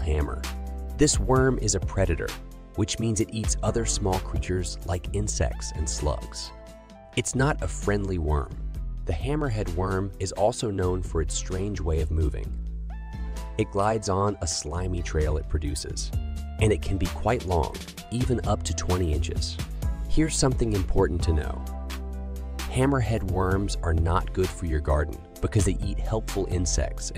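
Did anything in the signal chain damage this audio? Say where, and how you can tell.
No, nothing in the chain from capture to playback leaves any audible damage on this audio.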